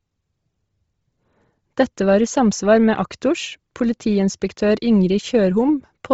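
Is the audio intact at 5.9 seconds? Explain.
No. At 5.9 seconds the speech carries the same damage heard across the whole clip, most likely Bluetooth LC3 compression. Nothing remains above about 7.7 kHz, and the band just below that edge sounds breathy and grainy. A low-bitrate transform codec like LC3 discards much of the upper spectrum and fills the gaps with noise. The heavy damage fits a bitrate around 24 kbps with short 7.5 ms frames.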